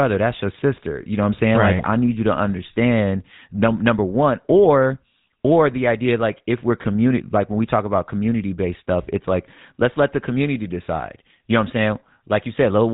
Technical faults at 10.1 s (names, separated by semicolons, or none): GSM full-rate codec; GSM bit errors